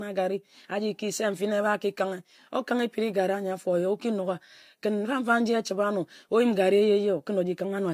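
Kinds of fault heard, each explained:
Transcoding between lossy codecs: throughout, the speech has a layered, smeared coarseness, with two kinds of compression artefact heard together. This is likely a Vorbis encode re-encoded as AAC-LC, and the sound points to rates near 64 kbit/s for each stage.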